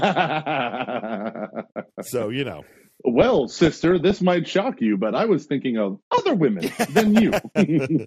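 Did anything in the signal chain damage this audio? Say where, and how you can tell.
Yes. At the codec stage, the whole speech clip is dull, with upper bands dropping in and out and a granular, gurgling roughness on what remains. That points to MP2 compression at a low rate, likely around 80 kbps, starving the sub-bands of bits.

In transmission, DAB burbling appears from 3.22 to 4.19 s and again from 7.07 to 7.42 s. Bit errors, at a rate in the region of a few tenths of a percent, slipped past error correction into the MP2 data, putting short blips of noise into individual sub-bands.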